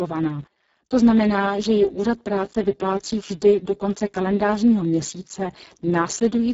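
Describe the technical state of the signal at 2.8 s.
At 2.8 s the speech has heavy Speex codec damage, present throughout. Few excitation bits, fitting about 5.8 kbps, leave it noisy and hoarse. Nothing sounds above 7.7 kHz.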